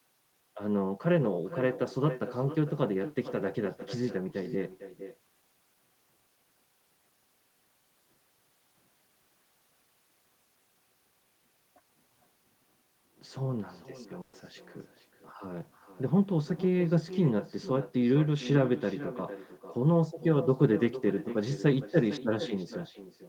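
Echo with no canceller, throughout: the far end's loudspeaker feeds its microphone unchecked, so every phrase returns about half a second later, roughly 14 dB quieter and thinner. Burst of packet loss, 14.21 to 14.35 s: about 120 ms of audio never arrived in time, so the receiver stretched the last sound into a fading fill before jumping ahead.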